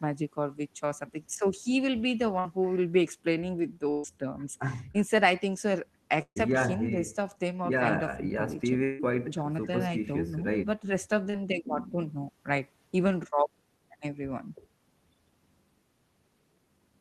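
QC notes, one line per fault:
2.39–2.47 s, 3.91–4.06 s, 6.22–6.38 s: burst of packet loss. Runs of consecutive packets failed to arrive in time, so the decoder extrapolated the last sound and attenuated it. That gives a held buzz or fading hiss of 54 ms, 130 ms and 138 ms, replacing 60 ms, 140 ms and 140 ms of real audio. At 6.22 s the fill decays into about 70 ms of silence before playback resumes further on.
4.92–4.96 s, 11.30–11.43 s, 13.30–13.34 s: short concealed packet loss. Brief gaps of 20 ms, 40 ms and 20 ms were patched with 22 ms, 34 ms and 19 ms of continued pitch or shaped noise, then crossfaded back into the real signal. Each is heard as a quick smear or wobble. The 11.30 s event also stretches timing by around 10 ms.
8.84–9.02 s: long network dropout, likely cause. About 160 ms of audio is missing. The receiver covers it with roughly 153 ms of decaying buzz and hiss rather than silence. 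Audio resumes past the lost section, about 7 ms later than the original timeline.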